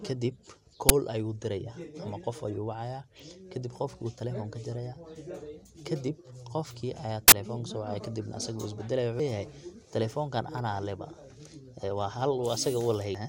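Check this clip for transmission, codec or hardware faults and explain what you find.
Two loud bursts interrupt the speech, both from an uninitialised buffer: one at 0.89 s lasting about 10 ms, and one from 7.28 to 7.32 s. In each case a block was played before any audio had been written into it, so leftover memory was read out as samples. The short first one is a loud crack, and the longer second one is a burst of harsh, broadband digital noise. A dropout would go silent instead, and a click would be a single tick rather than a sustained burst.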